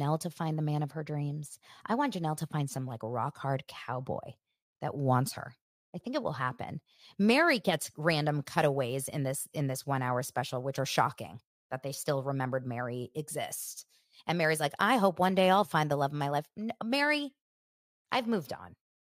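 Nothing in the recording points to a technical fault at any moment, so there's really nothing to flag here.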